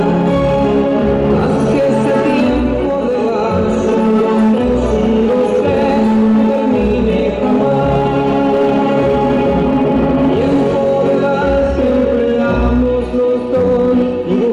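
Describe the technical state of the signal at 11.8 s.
Hard clipping is present at 11.8 s, as it is through the whole clip. The signal is driven about 4 dB past what a stage in the chain can pass, so its peaks are sliced flat, with roughly 7 percent of samples pinned at the limit. Those flat tops add harmonics high in the spectrum, heard as crackle and grit on louder moments. On a waveform the peaks sit squared-off against a fixed ceiling. A spectrogram shows vertical smears of energy reaching up to the top frequencies.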